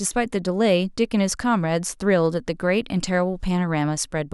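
No faults are audible.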